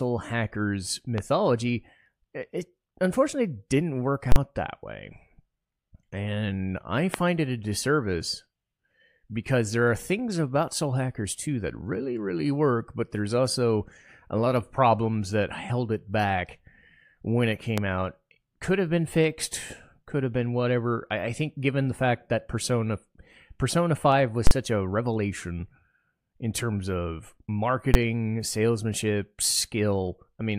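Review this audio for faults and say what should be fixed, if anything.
Loud pops occur at 1.18–1.20 s, 7.14–7.16 s just before "it a disservice", and 17.78–17.80 s just after "when it". Each is a single sharp pulse about 15 to 20 dB above the speech, likely from a plug, switch or static discharge. Unlike a full-scale block, the speech continues audibly underneath. To prevent them, secure connectors, ground the equipment and avoid switching during recording.

Invalid numbers at full scale appear at 4.32–4.36 s, at 24.47–24.51 s just before "such a revelation", and at 27.94 s. A calculation produced invalid values that were pinned at one extreme value for 40 ms, 40 ms and 10 ms. The longer blocks give a loud pop at each edge with silence between, and the shortest gives a single bang. No speech survives inside the block, which sets this apart from an ordinary pop. To prevent it, have the processing code detect invalid or infinite values and replace them before output.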